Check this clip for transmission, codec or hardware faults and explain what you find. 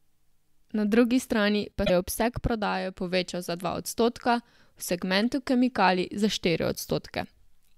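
Two short faults show damaged data in a compressed stream: 1.82–1.90 s, just before "je obseg prodaje povečal", and 5.19–5.21 s. Corrupted bytes make the decoder misread frames and hunt for the next header, heard as a brief chirp, squawk, click or short hole.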